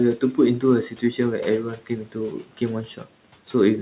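Speech cut by the noise suppressor occurs at 0.17–0.38 s, 0.85–1.19 s, 1.63–2.6 s and 2.86–3.06 s in this speech clip, with the longest stretch losing about half a second of sound. The suppressor mistook low-level parts of the speech for background and pulled them down by about 10 dB, and by about 13 dB in the third stretch, so soft consonants and endings sound swallowed, over a call band ending near 4 kHz.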